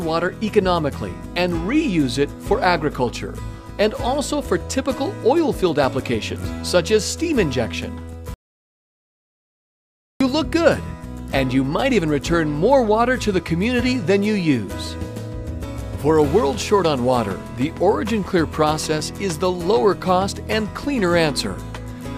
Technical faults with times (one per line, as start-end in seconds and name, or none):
8.34-10.21 audio dropout to silence